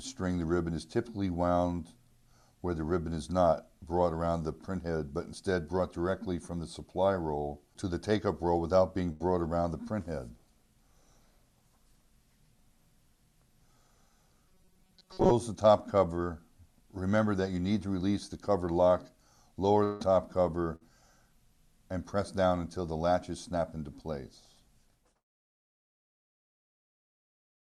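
At 9.11 to 9.23 s a burst of packet loss leaves an 83 ms gap, bridged by a fading continuation of the last sound, and 80 ms of audio is skipped. From 14.49 to 15.32 s a rigid metallic buzz at 188 Hz replaces the sound for most of the stretch, likely robotic sound from repeated short buffers of about 5 ms. At 19.84 to 20.03 s a long network dropout, likely from an interrupted connection, is filled for 160 ms with a decaying continuation, never reaching silence, and 160 ms of audio is lost. A second burst of packet loss at 20.76 to 20.90 s fills 49 ms while 40 ms goes missing.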